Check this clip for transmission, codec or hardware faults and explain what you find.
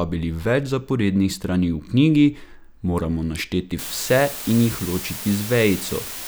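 A steady, even hiss rises to roughly 10 dB below the speech from 3.79 s to the end, with no harsh distortion. This is low bit depth with dither, which fits about 5 bits: dither turns the rounding error into constant white noise.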